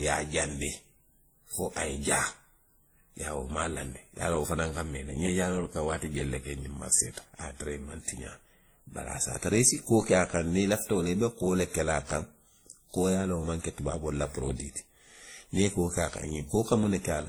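Speech, likely passed through a chain of lossy codecs, with sound that fits a low-rate WMA stage, then Opus, then WMA again. Each stage re-encodes the previous artefacts, so artefacts from different codecs stack throughout, with nothing above about 20.1 kHz.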